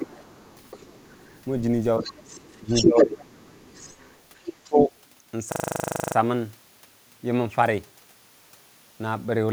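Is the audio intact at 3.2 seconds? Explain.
No. At 3.2 seconds two faults overlap. The first is the other side's voice leaking through, from 2.3 to 4.52 s. The far end was likely being played on the talker's loudspeaker and only partly cancelled before reaching the microphone. A second voice runs under the speech, not far below it.

The second fault is speech suppressed in double talk, from 2.58 to 3.23 s, so 3.2 s falls at its very end. Because both sides were likely talking at once, the echo canceller couldn't separate the near talker from that echo and turned everything down. The speech dips by up to around 15 dB, for about half a second in total across this stretch.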